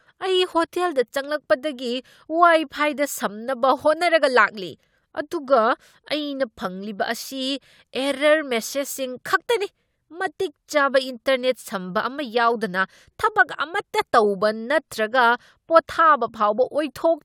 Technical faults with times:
none

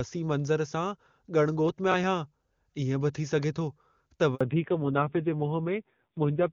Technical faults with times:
1.69-2.04 processor overload crackle
4.35-4.41 handover gap
4.41-6.53 fallback to narrowband

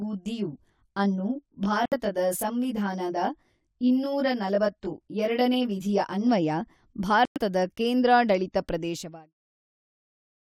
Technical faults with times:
0.00-6.29 channel delay (comb filtering)
1.85-1.93 Bluetooth dropout
7.25-7.38 Bluetooth dropout

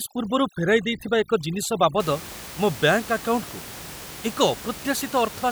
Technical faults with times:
0.00-2.00 overdone noise removal

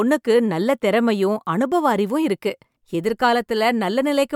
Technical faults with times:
none

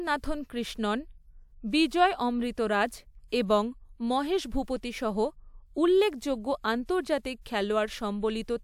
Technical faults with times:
none

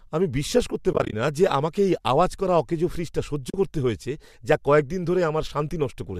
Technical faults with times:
0.93-1.13 AAC frame loss with muting
3.50-3.54 AAC frame loss with muting

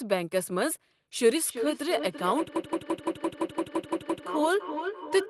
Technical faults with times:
1.45-5.29 feedback echo between two devices
2.56-4.27 system hang loop

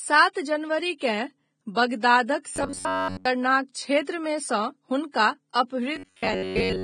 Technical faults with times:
0.00-6.84 Vorbis compression
2.56-3.25 robotic sound from repeated short buffers
5.96-6.83 robotic sound from repeated short buffers

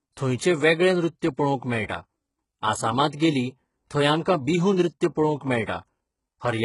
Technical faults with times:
0.00-6.64 HE-AAC compression

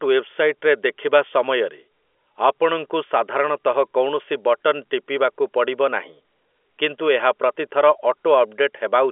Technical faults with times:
none

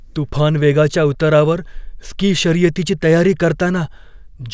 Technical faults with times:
none

